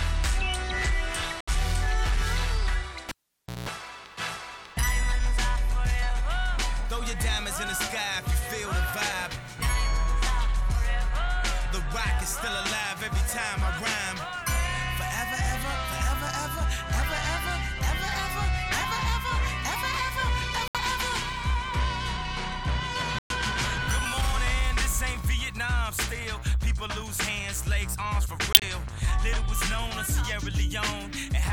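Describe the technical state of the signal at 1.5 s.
A corrupt frame muted fault runs from 1.41 to 1.49 s, ending just before the 1.5 s mark. Damaged compressed frames failed to decode, and the player filled their slot with silence rather than guessing at the content. The result is an abrupt hole of roughly 86 ms, a span that fits about three codec frames dropped in a row. The sound cuts out sharply and resumes on schedule, with no shift in timing afterwards.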